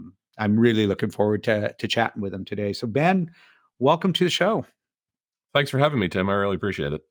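Throughout, sibilants carry a faint metallic shimmer over a dulled top end: imaging from linear upsampling, likely a straight-line doubling from 24 kHz to 48 kHz, leaving mirror images around 35 dB down between 12 and 24 kHz.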